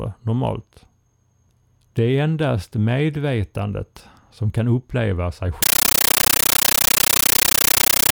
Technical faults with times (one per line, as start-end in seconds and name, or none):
5.62-8.13 compressed stream played as audio